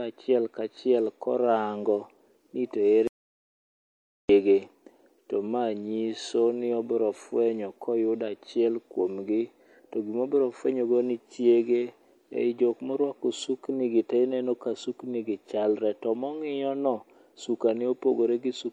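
From start to finish the speech carries plainly audible MP3 compression artefacts, and the character of the damage fits an encode at around 64 kbps as the likely cause. At that rate the encoder runs short of bits, so it drops weak frequency lines that flicker in and out between frames. The result is a watery, swirling texture, metallic chirps on s sounds, and softened, smeared consonant onsets.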